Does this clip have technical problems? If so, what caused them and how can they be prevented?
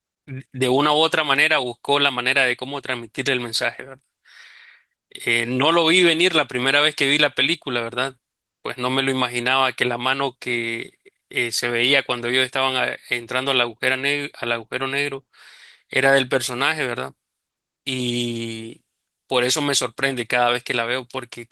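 No, nothing here needs fixing; the speech carries light Opus voice compression that keeps the full band, consistent with a mid-rate hybrid setting, which is normal for this kind of stream.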